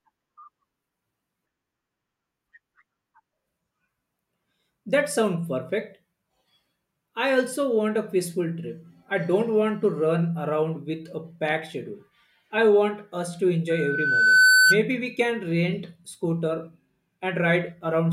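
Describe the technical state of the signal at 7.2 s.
At 7.2 s the speech signal is intact, with no fault audible at that point.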